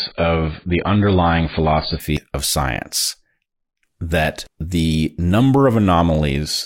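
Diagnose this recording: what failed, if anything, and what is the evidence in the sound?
The first 2.0 s were delivered by the playback chain as an adaptive stream starting at a low bitrate. Nothing is present above 4.9 kHz, and codec smearing is strong. At 2.0 s the top end returns abruptly with no gap, just before "of science". That fits the player opening on a rendition around AAC-LC 16 kbit/s for a fast start, then switching to roughly 96 kbit/s once its throughput estimate allowed.

At 2.17 s, just before "of science", and again at 4.47 s, the audio jumps forward, with about a fifth of a second lost each time and the two sides butted together without silence. The spacing suits chunk-based capture or processing with roughly 2.5 s blocks, so the likely cause is audio missing between chunks: each handover between blocks drops a short stretch instead of carrying it across.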